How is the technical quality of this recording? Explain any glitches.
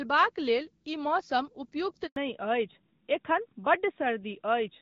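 The recording has two linked faults from 2.06 s onward: a brief dropout followed by a permanent loss of bandwidth. Before that, the speech has the light, clean coding character of AMR wideband (HD Voice), consistent with a mid-range rate around 12.65 kbit/s.

Handover gap, 2.06 to 2.16 s: the speech dies away and stays silent for 100 ms. This happens when a call is passed from one network link to another and no speech frames arrive during the switch. The decoder has nothing to play, so the audio falls away within a few tens of milliseconds, and whatever was said in that interval is gone.

Fallback to narrowband, from 2.16 s to the end: when the audio resumes after the gap, everything above 4 kHz is missing. The call has dropped from HD Voice to an older narrowband codec, most likely AMR-NB at its top rate of about 12.2 kbit/s. The narrowband coder works in a telephone band that ends at 4 kHz, so upper harmonics above it disappear. 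The speech turns duller and rougher than before the gap.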